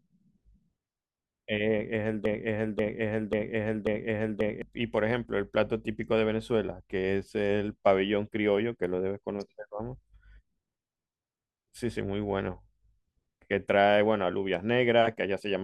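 From 2.26 to 4.62 s the speech falls into a broken-record loop: a 0.54 s fragment repeats exactly, back to back, four times, and the speech that belonged there is lost. The likely cause is a stalled player or stream resending its last buffered fragment.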